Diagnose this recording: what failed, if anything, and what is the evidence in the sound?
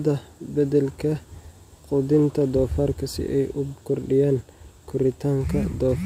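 The fault is imaging from linear upsampling, at the sample-rate conversion stage, and it runs through the whole clip. The speech is dulled at the top of the band, and a faint metallic shimmer rides on the sibilants. That shimmer is a mirrored image of the spectrum lying between about 11 and 22 kHz, roughly 40 dB below the signal. It fits a 22 kHz source raised to 48 kHz by straight-line interpolation, which filters too weakly to remove the image.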